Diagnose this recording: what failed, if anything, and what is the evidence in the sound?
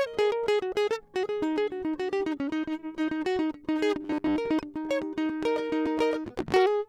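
From 4.02 to 4.36 s the driver or buffer stage likely ran short of fresh audio and looped a 10 ms block for most of that span. This robotic sound from repeated short buffers stamps a rigid, metallic 100 Hz buzz over the music.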